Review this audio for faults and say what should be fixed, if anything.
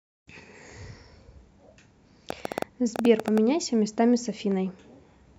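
There's a train of clicks running from 2.30 s to 3.39 s, about ten sharp ticks at roughly 9.3 per second but unevenly spaced, each much the same shape and poking well above the speech, around 15 dB over it. The sameness points to something repeatedly injecting a pulse, likely electrical interference from nearby gear or a faulty connection or power supply. To prevent it, move phones and power supplies away from the interface and check its cabling and connection.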